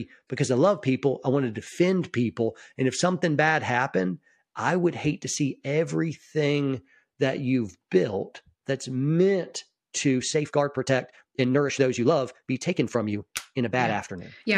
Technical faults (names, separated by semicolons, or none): time-stretched section